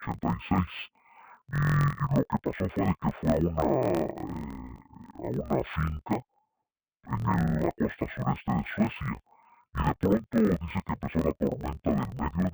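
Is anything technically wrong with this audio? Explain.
Yes. Throughout, interleaved audio is read as planar: each 23.2 ms block splits into half-speed halves, dropping the speech an octave and chopping it at 43.1 Hz, which fits a 1024-sample block.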